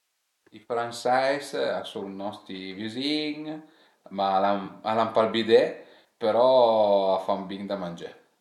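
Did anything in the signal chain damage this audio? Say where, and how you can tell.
Yes, at the codec: corrupt frame concealed at 4.65–4.69 s and 6.00–6.05 s, where the decoder masked damaged AAC frames.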